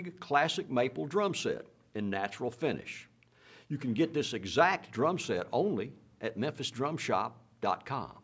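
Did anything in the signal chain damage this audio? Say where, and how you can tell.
No, the signal chain did no damage: the audio has been through a call's microphone processing, which rolls off the lowest bass and leaves nothing above 8 kHz, and both are normal behaviour for that stage.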